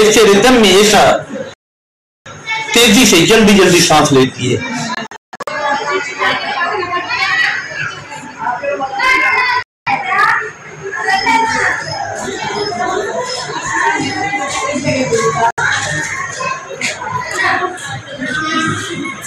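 Hard clipping runs throughout: the signal is driven about 17 dB past full scale, flattening roughly 7 percent of samples into a harsh fuzz on every loud sound rather than occasional peak crackle. Digital broadcast dropouts mute the sound at 1.54 to 2.26 s, 4.95 to 5.48 s (several short holes, the longest about 0.17 s), 9.63 to 9.87 s and 15.51 to 15.58 s. Unlike a level dip, each drops the sound to silence with the missing audio simply gone.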